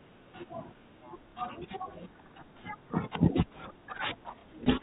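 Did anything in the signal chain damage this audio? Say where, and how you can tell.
Yes, at the network stage: two short stretches of packet loss with last packet repeated, at 1.32–1.35 s and again at 4.41–4.44 s, each 30 ms long, which fits one lost 30 ms packet. The receiver filled each gap by replaying the previous chunk. Each repeat is heard as a small blip. On a waveform the repeated segment appears as a duplicated block with abrupt joins. On a spectrogram, which stops at 4 kHz from the G.711 telephone coding, the repeated segment shows as a copy of the frame just before it.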